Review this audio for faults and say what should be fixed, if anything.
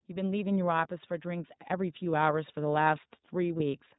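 The iLBC codec shapes the whole speech clip: each 20 ms frame is coded on its own, leaving plainly audible roughness and a synthetic edge. A spectrogram shows an empty band above 4 kHz, and the sound fits the 15.2 kbps mode. Prevention: use a wideband codec such as Opus when both ends support it.

Automatic gain rising lifts the level by about 3 dB between 1.22 and 2.62 s, as the gain control judged the input too quiet and raised speech and background together. The waveform envelope widens gradually across that span, with no step. Prevention: set a proper input level so the gain control has nothing to correct.

Lost iLBC frames occur at 2.04 to 2.06 s and 3.58 to 3.62 s, each a single 20 ms frame. The decoder fills each gap by repeating the last pitch cycle mixed with noise, heard as a brief buzzy held vowel, and the speech recovers at once because iLBC frames are independent. A spectrogram shows short smeared harmonic stripes at those points. 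Prevention: add jitter buffering or forward error correction to the network path.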